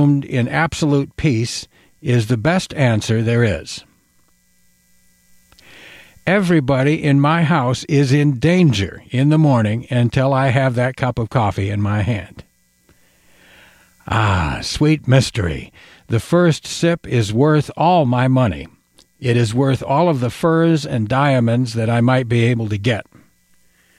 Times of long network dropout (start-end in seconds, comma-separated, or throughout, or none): none